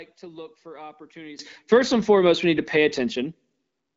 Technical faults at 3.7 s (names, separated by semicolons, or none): none